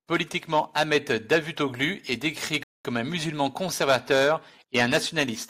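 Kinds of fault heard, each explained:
Rebuffering stall: Playback ran dry and paused. The speech drops to silence near 2.63 s for about 214 ms, then continues exactly where it stopped.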